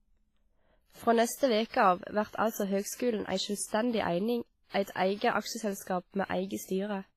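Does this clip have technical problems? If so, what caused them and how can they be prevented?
Yes. The speech was likely squeezed through heavy WMA compression at a low bitrate, around 24 kbps, so throughout it sounds washy and ringing, with breathing hiss and nothing above 15.3 kHz. Encoding at a higher bitrate, or with a better codec, would prevent this.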